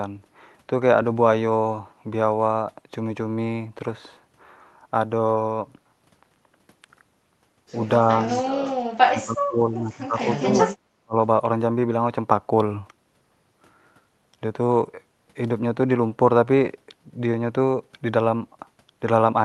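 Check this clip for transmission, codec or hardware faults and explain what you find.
There is one fault, speech suppressed in double talk, occurring twice: from 8.91 to 10.68 s, dipping by up to about 30 dB, and briefly from 11.01 to 11.15 s, dropping by about 40 dB. The likely cause is an echo canceller that, with both ends talking at once, mistook the near talker for loudspeaker echo and pulled the level down. Unlike packet loss, the speech sinks and fragments in step with the far side's talking rather than breaking into clicks or robotic repeats. Throughout, the audio is limited to a band of about 12 kHz, consistent with an Opus call path.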